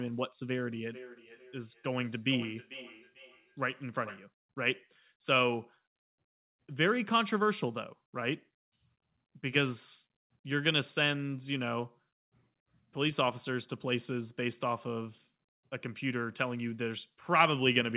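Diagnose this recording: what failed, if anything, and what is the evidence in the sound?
Feedback echo between two devices, a call-processing fault: from 0.71 to 4.31 s the sound returns roughly every 400 ms, about 17 dB below the speech. One device's loudspeaker feeds the other's microphone, beyond either echo canceller. Unlike reverberation, each return is a distinct, thinner copy at fixed spacing.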